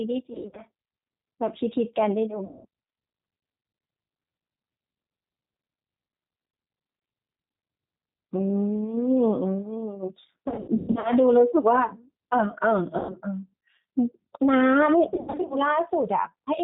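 Speech carried over a G.729 codec at 8 kbit/s, with plainly audible coding roughness; the spectrogram shows nothing above 4 kHz and a slightly smeared, synthetic texture. VoIP packet loss concealed by the speech codec occurs at 0.33–0.62, 2.45–2.65, 10.48–11.11, 12.99–13.16 and 15.14–15.59 s, where the decoder stretches its last sound into a buzzy tone or coloured noise that fades. On a waveform these show as decaying, repetitive stretches, and the level stays weak briefly after packets resume.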